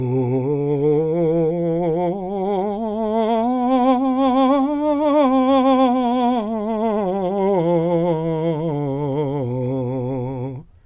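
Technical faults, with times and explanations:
No technical faults can be heard in this music. Nothing in the audio calls for a time or an explanation.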